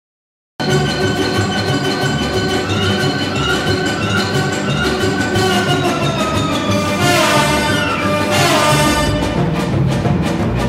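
The audio opens on dead digital silence, then jumps straight into a sound already under way at about 0.6 s. There is no attack or fade-in. This is a cut-off start: capture began late, mid-sound.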